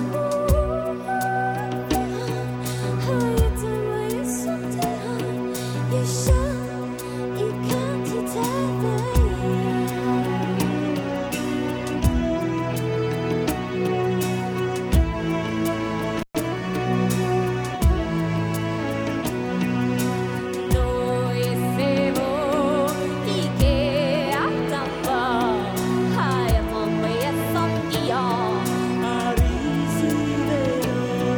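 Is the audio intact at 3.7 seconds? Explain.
Yes, at 3.7 seconds the audio plays through cleanly, with no dropout, click, distortion or other fault.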